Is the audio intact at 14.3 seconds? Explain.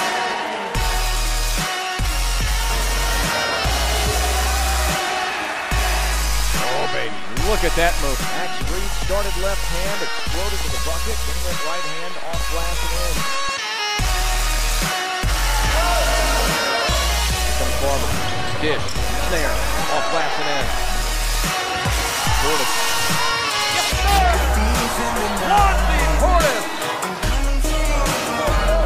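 No, 14.3 s sits inside a train of clicks from 5.79 to 28.17 s: uneven ticking around five per second, about as loud as the sound, likely from interference.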